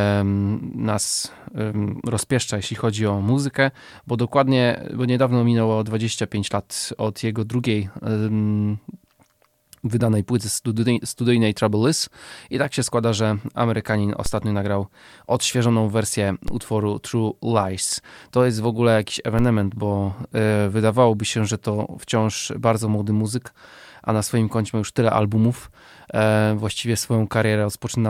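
DC steps at 14.26, 16.48 and 19.39 s: three low thumps in this speech recording, just before "nagrał odświeżoną wersję utworu", just after "nagrał odświeżoną wersję", and between "jest w ogóle jakiś" and "bo yy wydawałoby się". Each time the waveform's zero line jumps by about -14 to -15 dBFS, then drifts back as a 5 Hz high-pass drains the offset.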